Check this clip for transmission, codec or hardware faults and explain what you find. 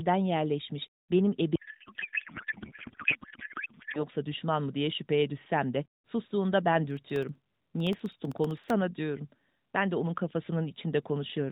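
Two faults stand out in this speech clip, which has come through the AMR narrowband mobile codec with light coding damage and nothing above 4 kHz.

From 1.56 to 4.05 s, right after "yerleşmiş benim" and ending before "düşman mı diye şüpheye", there is a codec payload misread. The sender packed AMR frames in octet-aligned form, but the receiver parsed them as bandwidth-efficient, so every field lands in the wrong bit position. The decoder then synthesises from wrong parameters, and the speech gives way to garbled noise and warble that barely follows it.

From 6.91 to 8.70 s, starting after "düşsem de sustuğunda ben", there are periodic USB or driver dropouts. Something stalls the USB transfer or audio driver every 64 ms, and each stall replaces a very short stretch of signal, around half a millisecond, with silence. About thirty of these gaps give a steady train of ticks at roughly 16 per second, audible against the speech.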